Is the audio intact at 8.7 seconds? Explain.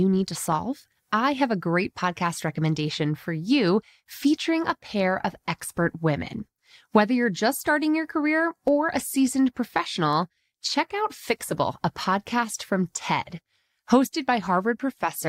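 No. At 8.68 s, between "just starting your career" and "or a seasoned", there is a single sharp click, likely from dropped samples: a fraction of a millisecond missing, so the waveform jumps abruptly.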